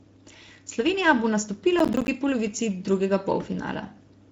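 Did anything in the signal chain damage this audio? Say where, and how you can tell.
Yes, the audio was damaged at two stages.

At the codec stage, the speech carries Speex codec damage for the whole clip. It sounds noisy and hoarse, and the damage is plainly audible. Nothing is present above 7.7 kHz, which fits Speex's wideband mode. The harshness suggests a middle setting of around 16.8 kbps. Speex codes speech as a predicted filter plus an excitation signal. With a limited bit budget, that excitation gets coarse, and the voice takes on this rough, hoarse texture.

At the driver or buffer stage, a burst of processor overload crackle runs from 1.79 to 2.08 s, ending just before "polovici drugega". It sounds like a gritty tearing laid over the speech. Within it are several tiny hard-edged dropouts to silence, roughly seven of them. Each dropout points to a buffer of about 10 ms. The processor missed a run of deadlines, and each missed buffer played out as silence.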